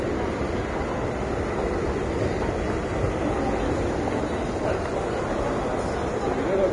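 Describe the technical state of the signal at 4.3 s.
At 4.3 s you're hearing heavy damage that runs through the whole clip, most likely Vorbis compression. Nothing survives above about 10.6 kHz, and the treble left underneath is quantised into grainy hiss, roughening tones and smearing attacks, which fits a bitrate of roughly 30 kbps.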